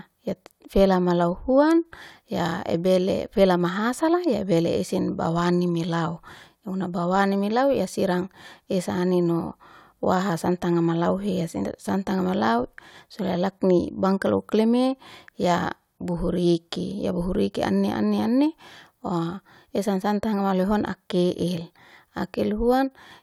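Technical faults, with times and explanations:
No technical faults detected.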